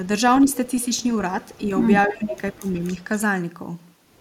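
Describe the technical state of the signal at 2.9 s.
An echo leak runs from 2.85 to 3.04 s: a faint, delayed copy of the speech trails the original by about 279 ms, sitting well below it. This likely comes from a loudspeaker-side echo canceller letting some of its microphone pickup back into the call.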